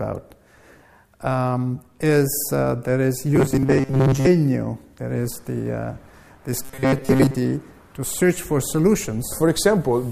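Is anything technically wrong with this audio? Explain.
Yes. Twice, from 3.36 to 4.27 s and from 6.62 to 7.36 s, the audio turns into robotic sound from repeated short buffers. Fresh audio likely arrived too slowly, so playback kept looping a fragment of about 7.5 ms in place of most of the real signal. That loop stamps a fixed 133 Hz buzz on the sound, leaving a rigid, metallic drone that only loosely tracks the original.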